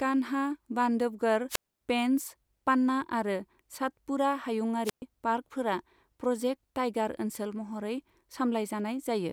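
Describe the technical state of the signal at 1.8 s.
At 1.8 s the signal is just leaving a wireless microphone squelch dropout that runs from 1.49 to 1.81 s, right after "कान्हा बान्धवगढ़". The FM radio link faded, hiss swelled briefly, then the receiver's squelch gated the output shut for about 257 ms before the speech returns. On a waveform this is a flat, near-zero gap. A spectrogram shows a smear of broadband noise at its edge, then an almost blank column until the speech harmonics resume.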